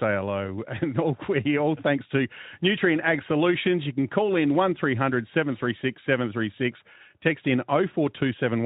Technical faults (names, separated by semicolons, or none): none